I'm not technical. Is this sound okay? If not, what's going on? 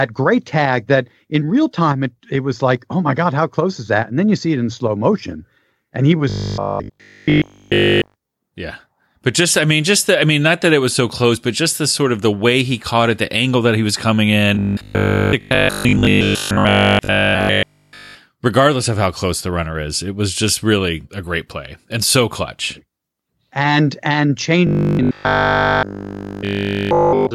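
No. Three times the speech turns into a stiff, metallic buzz with a fixed low hum: 6.30 to 8.16 s, 14.55 to 18.17 s after "that he was coming", and 24.67 s to the end after "and and". This is robotic sound from repeated short buffers. The likely cause is audio arriving too slowly, so the player keeps looping the same 20 ms scrap instead of the real sound, producing a 50 Hz drone.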